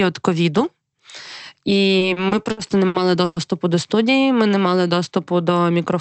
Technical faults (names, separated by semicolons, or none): repeated stalls (stutter)